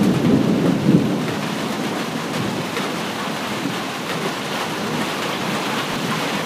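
A recording of everyday sounds has one case of chunks out of order between 5.92 and 5.96 s. A 20 ms block arrives one chunk late and plays after its successor, so nothing is missing but the sequence is swapped, giving a brief jumbled moment. On a waveform, three abrupt discontinuities appear at the joins, each showing as a thin vertical broadband stripe on a spectrogram.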